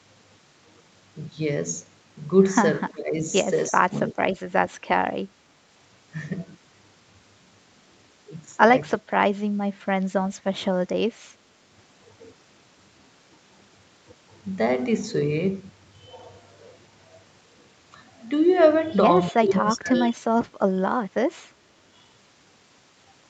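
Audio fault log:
2.91–3.24 s, 3.69–3.94 s, 4.12–4.26 s, 8.96–9.32 s and 19.31–20.26 s, speech suppressed in double talk: the speech ducks sharply, by roughly 20 to 30 dB at the deepest, in stretches from about 150 ms up to about a second, the longest near 19.3 s. The likely cause is the far end talking at the same moment, so the echo canceller mistook the talker for loudspeaker echo and pulled the speech itself down. The speech, not just the room tone, sinks or breaks up.
9.74–9.85 s, background gated by the echo canceller: the room sound briefly dips by about 8 dB for roughly 100 ms, then comes back once the canceller releases. Here the loudspeaker was playing, so the canceller clamped the microphone and took the background with it. Compared with the double-talk cuts, this drop is shallower and shorter, and it hits the ambient sound rather than the speech.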